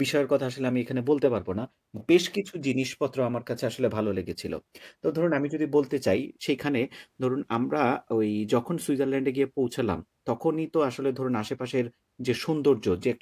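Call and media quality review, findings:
No findings in this call and media quality review; the speech shows no faults.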